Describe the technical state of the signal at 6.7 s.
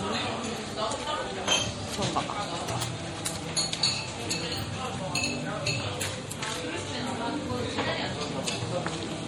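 At 6.7 s you're hearing the same MP3 compression damage that runs through the whole clip. The encoder likely ran short of bits, which fits something like 48 kbps, so weak frequency lines flicker on and off, giving a watery, swirly texture and smeared attacks. The top also stops dead at 19.2 kHz.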